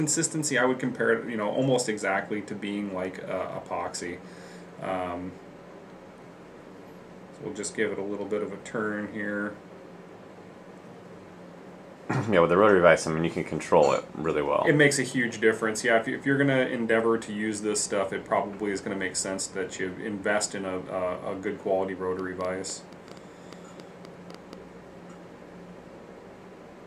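From 22.19 to 24.54 s, a train of clicks appears, likely from interference or a faulty connection injecting repeated pulses. Around fifteen similar clicks arrive unevenly at about 5.6 per second, peaking roughly 5 dB above the signal, heard as uneven ticking over the sound.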